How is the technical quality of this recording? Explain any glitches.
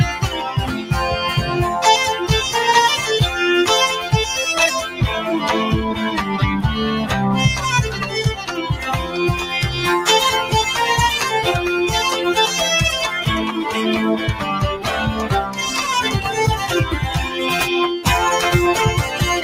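One glitch stands out. From 8.38 to 8.58 s the sound dips by about 7 dB for about a fifth of a second: the noise suppressor mistook it for noise and cut it.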